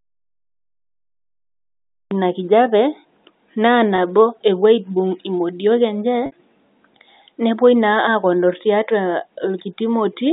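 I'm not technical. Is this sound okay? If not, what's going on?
No. Twice, small pieces of the speech failed to arrive over the network, and the receiving end filled each gap by replaying the last tiny stretch of voice. This is called packet loss with pitch repetition. From 3.96 to 3.98 s, a 20 ms gap comes out as a brief held, buzzy sound. From 6.26 to 6.32 s, a longer 60 ms gap fades toward silence before the speech cross-fades back in.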